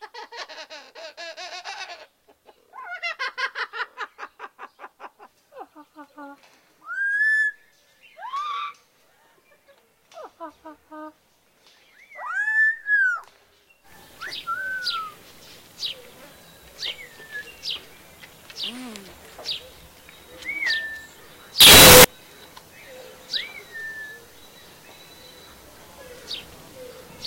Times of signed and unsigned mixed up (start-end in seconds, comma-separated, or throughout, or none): 21.60-22.04